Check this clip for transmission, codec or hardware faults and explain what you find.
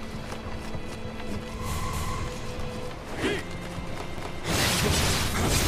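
Overlapping chunks at 1.93 s and 4.18 s: each new 2-second chunk begins 250 ms early, so that slice replays, heard as a brief stutter at each join.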